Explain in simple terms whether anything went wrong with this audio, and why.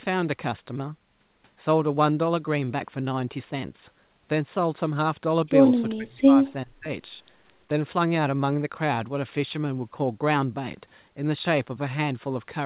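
Yes, something went wrong, twice and briefly. From 5.96 to 6.46 s the speech sinks sharply. From 6.65 to 6.89 s it drops again, even deeper, almost to silence. Each dip lasts a fraction of a second. This is likely speech suppressed in double talk. When both sides talk at once, the call's echo canceller can mistake the talker for echo and turn the speech down. The narrow, phone-like sound, with nothing above 4 kHz, comes from the call line itself.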